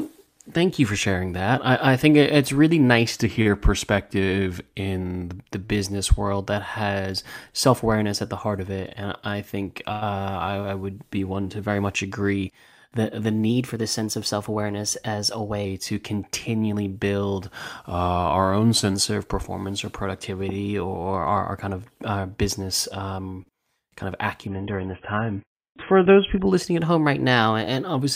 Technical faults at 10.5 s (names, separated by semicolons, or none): none